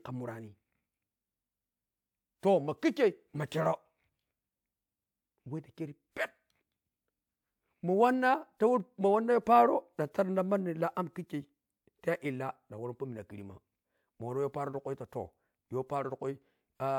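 Listening through the speech recording, nothing stood out as a technical fault at any point.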